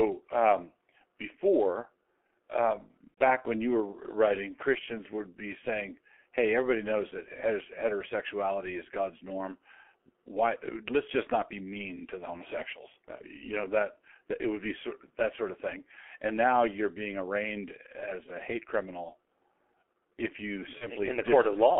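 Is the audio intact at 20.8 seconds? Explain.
No. From 20.78 to 20.89 s there is VoIP packet loss concealed by the speech codec. About 30 ms of audio went missing, consistent with a single lost frame. The decoder filled the gap by extending its last pitch and spectral shape at falling gain, so the sound turns briefly into a buzzy tone or coloured noise that fades before recovering.

That moment also sits within the G.723.1 codec damage heard across the whole clip. The band is limited to roughly 300 Hz to 3.4 kHz, and the heavy coding, consistent with a bitrate near 6 kbit/s, leaves the speech muffled and hoarse with smeared consonants.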